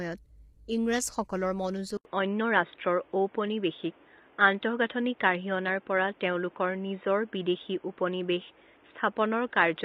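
A low-bitrate codec likely ran on the whole clip: the coarse, grainy texture fits low-delay AAC compression of the AAC-ELD kind at around 24 kbps. With so few bits per frame, the encoder quantises its frequency lines crudely, so the codec damage is heavy from the first second. Voices come out rough, with noise filling the gaps between harmonics and a top band that sounds lowered or synthetic.

At 1.97 s the input switched to a poorer device, likely another microphone or a headset in call mode, and it stays there to the end. The switch leaves an 80 ms gap of silence, after which nothing passes above 3.8 kHz, so the sound turns dull and boxy. The level shifts by about 5 dB, and a new background noise appears, roughly 35 dB under the signal.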